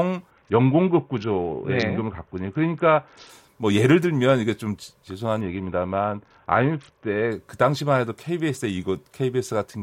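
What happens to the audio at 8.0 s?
Nothing goes wrong at 8.0 s; the speech there plays through intact, with no dropout, click, glitch or other audible fault.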